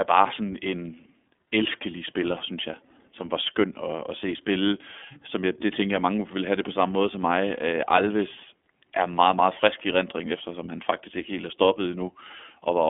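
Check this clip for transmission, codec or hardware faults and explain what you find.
One codec fault runs through the whole clip: the speech has passed through the iLBC codec. The codec codes each 30 ms frame's excitation on its own, at a rate that fits its 13.33 kbps mode, over a narrowband line passing roughly 250 Hz to 3.5 kHz. The result is a boxed-in, telephone-like tone with nothing above 3.7 kHz and a plainly audible rough, slightly synthetic texture on every stretch of speech.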